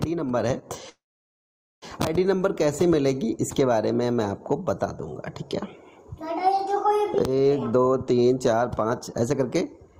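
From 0.89 s to 1.84 s the audio stops and resumes where it left off, a call audio freeze likely caused by packets held in transit draining the jitter buffer. A short tail fades into about 840 ms of silence, nothing is lost, and the stream now runs 925 ms late.

Between 7.7 s and 9.95 s a jitter buffer speed-up plays the audio at 132% of normal rate at unchanged pitch. The receiver trims pitch-period-sized slices back to back to work off its excess delay, cutting roughly 0.7 s and giving a hurried feel.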